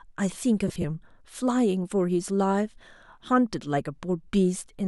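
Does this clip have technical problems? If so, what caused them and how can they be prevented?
Yes. Lost LE Audio frames between 0.68 and 0.84 s: about 70 ms of audio went missing in short gaps, the longest around 30 ms. The LC3 decoder filled each gap by repeating the previous spectrum with randomised phase, so the speech smears into noise. A spectrogram shows blurred, streaky patches where harmonics vanish. Keep the Bluetooth link strong and free of interference, for example by staying close to the source and avoiding crowded 2.4 GHz channels.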